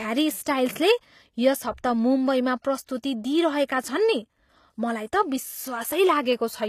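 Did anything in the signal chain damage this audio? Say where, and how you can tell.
Yes. Throughout the speech, sibilants sound gritty and metallic, and nothing reaches above about 14.9 kHz. This points to the codec stage, likely HE-AAC compression at a low bitrate near 24 kbps, where the treble is rebuilt from copied lower bands rather than coded directly.

Pre-echo appears from 2.86 to 2.88 s, a short hiss spreading about 23 ms ahead of an attack, and again at 3.03 s over about 10 ms. The codec spread its quantisation noise across each transform block, so noise sized for the loud onset leaks into the quiet moment before it.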